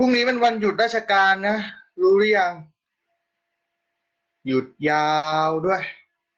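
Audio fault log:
5.17–5.26 s, burst of packet loss: about 60 ms is filled by a fading continuation of the preceding sound, unlike a silent dropout, and the speech then resumes with roughly 60 ms skipped.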